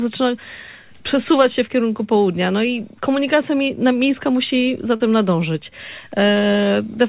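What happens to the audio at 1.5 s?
At 1.5 s the audio carries on intact, with nothing breaking into it beyond the narrowband call-codec character it has throughout, where nothing is heard above 4 kHz.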